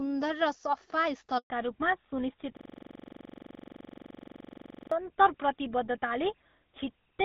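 Speech, carried as a wideband call whose light coding grain fits AMR-WB at 12.65 kbit/s, breaks at 1.38 s with a handover gap: the voice cuts out within a few tens of milliseconds and stays silent for 120 ms until 1.5 s, when the new link starts delivering frames. Whatever was said across that switch is gone, since no speech frames reached the receiver while the call moved between networks. From 1.5 s to the end, the call shows a fallback to narrowband. Nothing is present above 4 kHz, so the voice loses its wideband air and sibilance and turns duller and rougher. That fits a drop from AMR-WB to the GSM full-rate codec, which only carries telephone-band audio. A system hang loop runs from 2.57 s to about 4.92 s. One 42.67 ms slice of audio repeats exactly, roughly 55 times, at 23.4 Hz, giving a mechanical stutter-buzz in place of the speech. The slice length fits a 2048-sample buffer that the sound hardware kept cycling through while the computer or driver was frozen.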